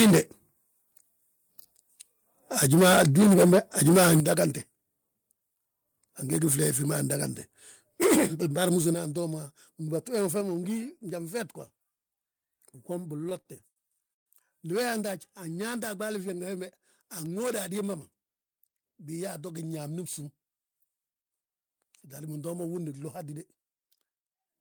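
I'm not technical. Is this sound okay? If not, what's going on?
No. The microphone's input was likely set too high, causing microphone overload: from 0 to 0.19 s and 2.63 to 4.2 s the loudest moments lose their tops and sound harsh and crackly.

The call software then likely turned the microphone down in single steps, a microphone volume stepped down fault, so the voice suddenly gets quieter at 3.02, 4.2, 8.94 (just before "antoo ma") and 10.41 s.

Between 13.17 and 14.28 s, audio arrived late eight times and the receiver stretched the last sound each time (repeated stalls, a stutter). The speech drags and hiccups, with the longest pause about 0.13 s.

A jitter buffer speed-up happens when the receiver has too much audio waiting and trims small pieces to catch up. From 16.56 to 17.83 s the speech runs about 7% faster, and from 24.0 to 24.6 s about 10% faster, so it sounds hurried.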